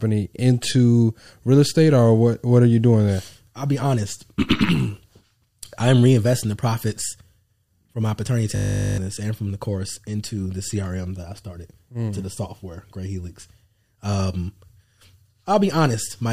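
From 8.56 to 8.98 s, a system hang loop replaces nearly half a second of speech. The driver stalled while the hardware replayed one 20 ms buffer, producing a steady 50 Hz buzz. The waveform shows identical repeating cycles, and the spectrogram shows evenly spaced 50 Hz harmonic lines.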